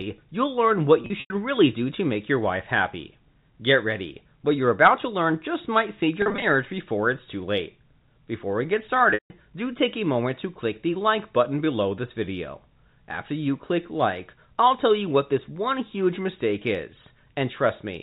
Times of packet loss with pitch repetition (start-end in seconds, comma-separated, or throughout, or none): 1.02-1.30, 6.22-6.42, 9.10-9.30